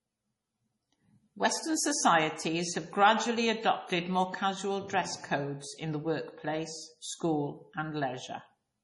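From start to finish the speech carries heavy MP3 compression damage, likely from an encoder starved of bits, which fits a low bitrate around 32 kbps. Nothing survives above 11.4 kHz, and weak spectral detail flickers in and out between frames, giving a watery, swirling texture with metallic chirps on s sounds and smeared consonant attacks. That frame-to-frame swirl is what separates it from a plain low-pass filter, which would dull the treble without any warbling.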